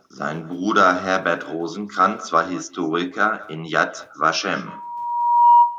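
From start to end, the speech carries an echo with no canceller. The far end's loudspeaker feeds its microphone, and nothing removes it. Each phrase returns about a fifth of a second later. The copy sits about 22 dB down and sounds thin.

From 4.67 to 5.78 s, a loudspeaker feedback squeal takes over. A microphone hears the speaker it drives, and the loop gain passes one at 953 Hz. That tone swells over roughly 0.7 s, to around 10 dB above the speech.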